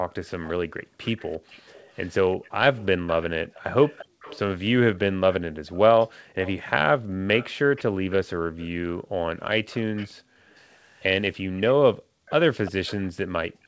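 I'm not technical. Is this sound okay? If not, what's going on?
No, it has two problems, both from a call where one side is on a loudspeaker.

Background gated by the echo canceller, from 0 to 1.5 s, 4.06 to 4.2 s, 5.5 to 7.3 s, 8.4 to 10.5 s, 11.5 to 12.3 s and 13.5 to 13.6 s: the room sound behind the speech suddenly sinks to near silence and then comes back. While the loudspeaker was playing, the call's echo canceller turned the microphone right down to keep the loudspeaker out, taking the background with it.

Echo leak, from 0.1 to 8.7 s and again from 9.7 s to the end: a faint second copy of the speech trails about a third of a second behind the original. This is likely caused by the loudspeaker side's echo canceller not removing everything its microphone picked up from the loudspeaker, so that leftover sound was sent back down the line.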